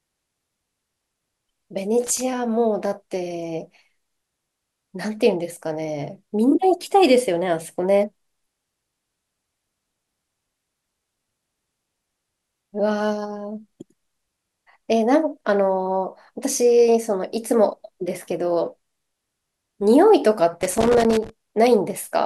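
At 2.04 to 2.21 s and again from 20.61 to 21.30 s the speech breaks into loose connector crackle: a worn contact keeps making and breaking, chopping the signal into an irregular scratchy burst, unlike the evenly spaced, identical clicks of a digital buffer fault.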